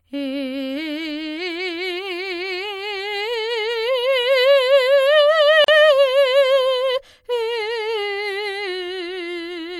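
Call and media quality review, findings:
Gap at a join of encoded pieces, 5.64 to 5.68 s. Music drops out for about 38 ms, then resumes where it stopped. Edges smeared by the codec. Probable component: encode/concatenation stage. Segments encoded separately, joined untrimmed. Encoder start delay and last-frame padding left in, forming the silence.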